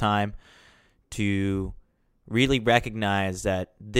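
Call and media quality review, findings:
Nothing to flag here; the speech comes through without any audible problem worth a ticket.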